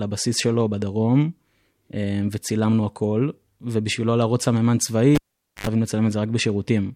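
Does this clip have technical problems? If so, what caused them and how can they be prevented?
Yes. At 5.15 s the speech cuts off with a sharp pop and drops to near silence for about 0.47 s. A short burst of 50 Hz mains buzz, lasting about 80 ms, follows, and a second pop brings the sound back by 5.67 s. This is a cable pulled and plugged in while live: the jack left the socket, and only its tip touched on the way back in. To prevent it, mute the channel before touching any connection, and secure the cables so they cannot be tugged loose.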